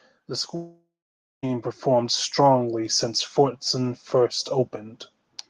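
From 0.28 s to about 3.0 s, automatic gain rising lifts the level of the speech by about 9 dB. The gain control judged the input too quiet and raised its gain slowly, so the voice and the background noise floor swell together over more than two seconds. That shared, gradual climb separates it from a speaker simply talking louder, where only the voice would grow and the room noise would stay put.

Inside that rise, from 0.55 s to 1.45 s, a long network dropout cuts out the audio. The most likely cause is that nothing reached the receiver for nearly 0.9 s. The last sound is carried on as a fading tail for roughly a third of a second, and then about 0.55 s of silence follows. When the speech returns, the missing stretch is simply gone. The decaying tail, the dead gap and the skipped content mark it apart from a brief packet loss, which would leave only a short click or smear.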